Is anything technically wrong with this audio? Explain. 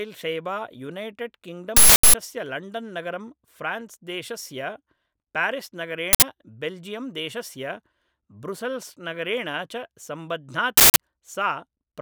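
Yes. This speech clip has three uninitialised buffer faults: harsh, loud bursts of digital noise at 1.77 to 2.14 s, 6.13 to 6.22 s, and 10.77 to 10.96 s. The bursts last about 0.37 s, 0.09 s and 0.19 s, which fits whole blocks of roughly 16384, 4096 and 8192 samples. Each buffer was sent to playback before any audio was written into it, so stale memory contents were played as if they were samples.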